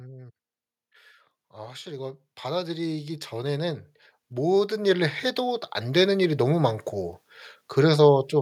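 From 1.51 s to 6.15 s the automatic gain rises: the AGC judged the input too quiet and lifted its gain by about 16 dB over roughly four and a half seconds, so speech and background noise swell together. The waveform envelope and noise floor climb steadily across that span.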